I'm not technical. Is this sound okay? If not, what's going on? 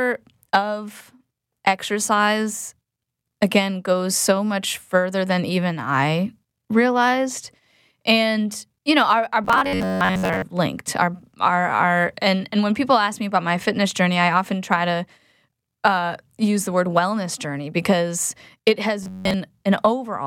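No. The speech turns robotic twice, from 9.44 to 10.42 s and from 19.03 to 19.34 s. This is robotic sound from repeated short buffers. The voice becomes a stiff, metallic buzz near 94 Hz. The likely cause is new audio arriving too slowly, so tiny snippets about 11 ms long get replayed in place of most of the real sound.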